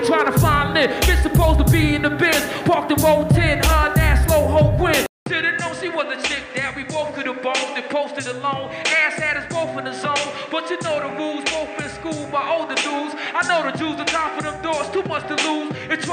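At 5.06 s the audio drops out for about 200 ms, then resumes audibly changed through to the end. Nothing remains above 8.9 kHz, so the top end sounds dull and boxy. The level sits roughly 5 dB lower, and a new noise floor appears, roughly 35 dB under the signal. Together these point to an input switched to a poorer device, likely a different microphone or a headset's call profile taking over mid-recording.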